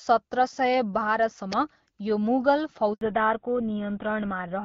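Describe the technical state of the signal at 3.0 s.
Right at 3.0 s you're sitting inside a handover gap, running from about 2.93 to 3.01 s. The call hopped networks and no speech frames came through for those 80 ms, so the sound fades out fast and there's a short dead patch before the new link picks up.

From 3.01 s to the end it's a fallback to narrowband. The band above 4 kHz is simply gone, so the speech sounds duller and a bit rougher than the clear HD Voice stretch before it. That fits a drop from AMR-WB at around 12.65 kbit/s to GSM full rate.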